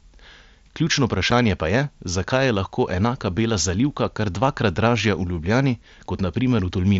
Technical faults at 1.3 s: unconcealed Bluetooth headset packet loss

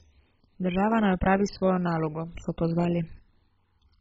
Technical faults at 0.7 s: MP2 compression

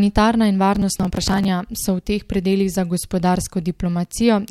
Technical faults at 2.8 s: none

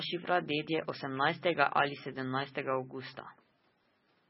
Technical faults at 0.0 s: MP3 compression

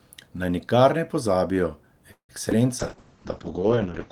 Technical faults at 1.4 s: none

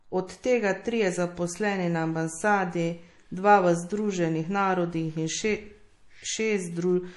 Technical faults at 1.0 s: MP3 compression

